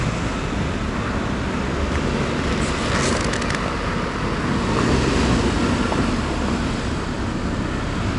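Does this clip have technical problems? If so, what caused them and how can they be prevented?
Yes. The whole clip carries 4-bit ADPCM compression: each sample is coded as a coarse step from a prediction, so gritty noise rides on every loud sound, and nothing above 10.6 kHz fits a low sample rate near 22 kHz. Prevent it with PCM or a modern codec.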